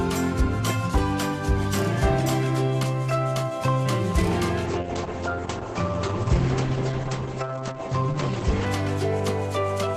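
From 4.66 to 8.66 s the adaptive stream dropped to a lower bitrate, likely a low-rate Opus stream, so the treble abruptly vanishes above 8.6 kHz and codec artefacts thicken, with no gap.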